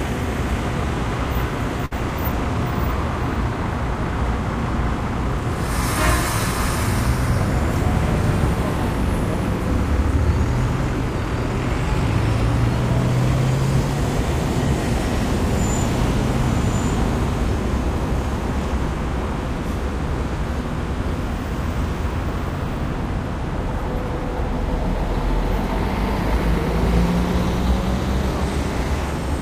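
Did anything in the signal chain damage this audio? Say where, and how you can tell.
Yes. A short stall from a late packet appears at the network and jitter-buffer stage, between 1.85 and 1.93 s. The sound there is held in place for about 58 ms, with a slight buzz or dip, and then resumes exactly where it left off. A packet arrived late, the buffer ran dry, and the receiver stretched the last audio until the packet came in, adding 58 ms of delay. Unlike a lost packet, no audio is skipped; unlike a dropout, there is no silent gap.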